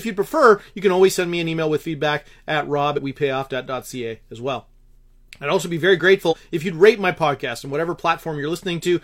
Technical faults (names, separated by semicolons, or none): damaged data in a compressed stream